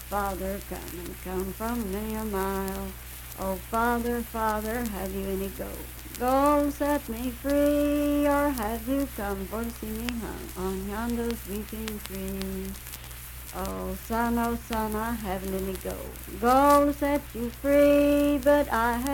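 No technical faults can be heard anywhere in the recording. Nothing in the audio points to an error that would need explaining.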